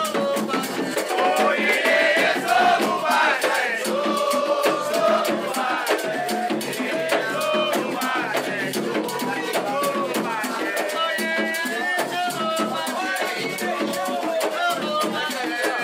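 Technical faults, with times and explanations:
No technical faults detected.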